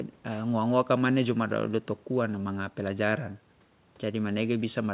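Speech heard through a telephone-band call path, with nothing above 4 kHz, as fits a G.711 A-law codec, and no technical faults in the signal.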